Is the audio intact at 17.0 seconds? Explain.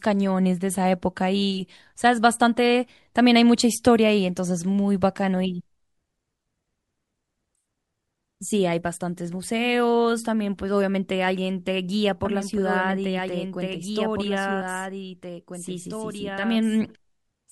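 No. At 17.0 seconds a second copy of the speech, about 5 dB quieter, plays about two seconds behind the first, dry and full-band, from its abrupt start at 12.25 s to the end. This doubled audio track likely comes from a slower capture path mixing in a late duplicate.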